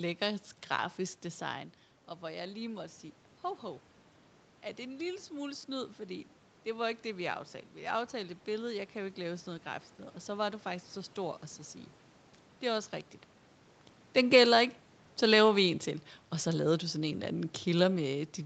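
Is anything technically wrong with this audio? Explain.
Yes, there is automatic gain rising from 4.77 s to 9.93 s. The input level dropped by about 12 dB, and the gain control responded by slowly raising its gain by about 4 dB over those five seconds. The speech and the room noise behind it swell together instead of the voice alone recovering, so the lift is gradual and only partly restores the lost level. The level changes near 1.5 s and 13 s come from the talker moving, and the absence of content above 8 kHz fits a wideband Opus call path.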